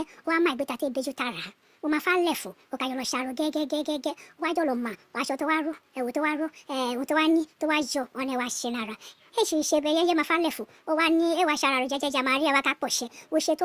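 Throughout, wrong sample rate playback runs the speech 1.45 times fast and 6.45 semitones high; unlike a pure pitch shift, tempo and pitch rise together.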